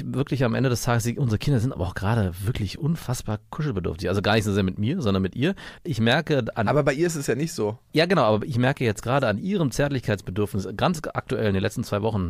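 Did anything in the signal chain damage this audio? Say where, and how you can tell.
No, nothing in this speech recording stood out on listening as damage from any stage of the signal chain.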